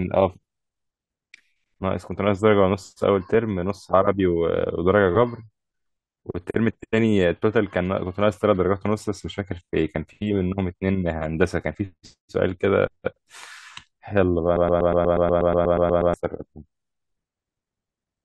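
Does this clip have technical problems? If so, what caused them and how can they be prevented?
Yes. From 14.56 to 16.14 s, a broken-record loop repeats one 121 ms fragment 13 times back to back, and the speech that belonged there is lost. This is likely from a stalled player or stream resending its last buffer. The waveform and spectrogram show identical blocks at a steady 121 ms spacing. Stall detection that mutes or conceals the gap instead of replaying the last fragment would prevent it.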